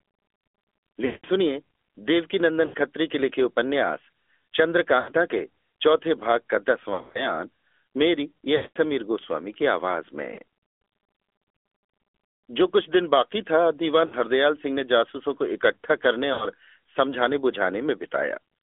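The whole clip carries the sound of the AMR narrowband mobile codec. The speech sits between 300 Hz and 3.4 kHz, with nothing above. It has a buzzy, synthetic edge. That fits a mid-rate mode near 10 kbps. The codec rebuilds speech from a vocal tract model and a few pulses per subframe, so fine detail is lost.

Lost AMR speech frames break in eight times: at 1.06 to 1.26 s, 2.66 to 2.86 s, 5.00 to 5.12 s, 6.94 to 7.32 s, 8.56 to 8.77 s, 10.34 to 10.39 s, 14.06 to 14.14 s, and 16.34 to 16.51 s. At each one, the decoder repeats the last good settings with falling gain. The short gaps of 40 to 80 ms give a brief warble or dip. The longer runs of 180 to 200 ms, at 1.06 s and 8.56 s, smear and fade toward silence. The 6.94 s stretch is scattered. Several short dropouts spread over about 0.2 s make it flutter.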